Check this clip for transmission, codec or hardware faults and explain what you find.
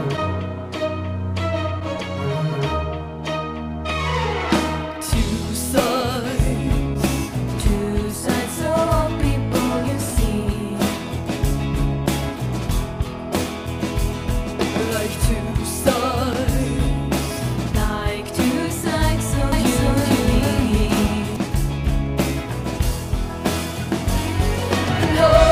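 One fault stands out. From 19.52 to 21.36 s there is a doubled audio track. A full-band copy trails about half a second behind, about as loud as the original, with no decay. It likely comes from a second, slower capture path or two misaligned copies in an edit. The copy starts and stops abruptly.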